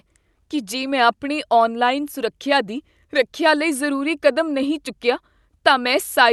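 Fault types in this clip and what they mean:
No faults are present in this speech clip.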